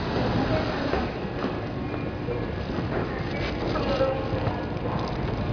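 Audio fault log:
No fault is logged for this audio.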